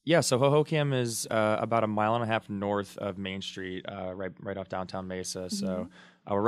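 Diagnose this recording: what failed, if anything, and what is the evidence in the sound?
Nothing in this speech recording points to a failure at any stage, so there's no evidence to chase and no mechanism to explain.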